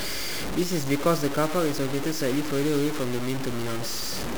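Low bit depth without dither runs throughout the speech. Grainy distortion tracks the signal, roughly 10 dB below it, likely from truncation to about 4 bits.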